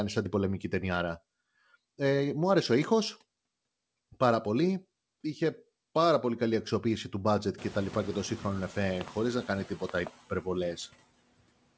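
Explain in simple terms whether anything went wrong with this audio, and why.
Noise suppressor artifacts run through the whole speech clip. A noise suppressor tries to remove steady background hiss by turning down, moment by moment, any part of the sound it judges to be noise. Here it pushes the noise down hard, so the background drops away in the gaps and comes back up under the speech. The voice can come across thin or watery, especially after the room noise gets louder at about 7.5 s.

Loud pops strike twice: from 9.01 to 9.10 s, right after "και το σύγχρονο εφέ" and before "να κάνει", and again from 9.89 to 10.09 s, just after "να κάνει". Each one is a quick double pop, clearly louder than the speech, which carries on underneath. A sudden jolt of electrical voltage, likely from a plug, a switch, static or a glitching sound driver, is added on top of the audio, and the equipment after it turns that jolt into a sharp snap.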